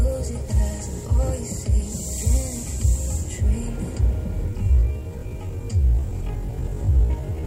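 At 4.47 s the pace abruptly drops, and it stays slow to the end. This is a time-stretched section. The audio runs at about half speed, 0.52 times the original rate. The pitch does not fall with it. The likely cause is software lengthening this part to fill a set duration, repeating short slices to stretch it without changing pitch. The slowed section drags.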